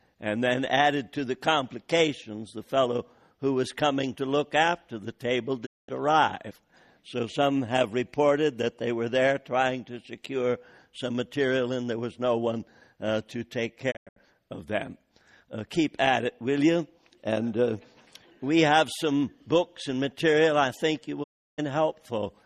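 At 5.65, 13.90 (broken into short holes) and 21.22 s, digital broadcast dropouts: the receiver lost good frames and muted, fading out in 20 ms and leaving silent gaps of roughly 0.2 to 0.34 s.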